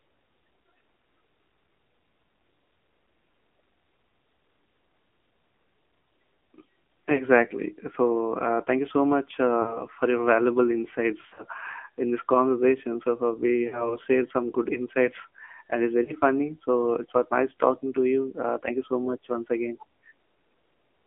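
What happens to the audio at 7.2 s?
Around 7.16 to 7.24 s there's a lost AMR speech frame, just one 20 ms frame that failed its checksum. The decoder covers the gap by reusing the last good pitch and vocal-tract settings at a lower gain, so you hear a quick dip or warble. The sound then picks up again a touch weak or rough for a moment before it settles.

That moment sits inside the AMR narrowband mobile codec that runs through the whole clip. The sound is squeezed into a phone band of roughly 250 Hz to 3.4 kHz, and the codec damage is plainly audible: a buzzy, synthetic edge from the vocal-tract model being driven by only a few pulses. That degree of buzziness fits a low mode around 7.4 kbps.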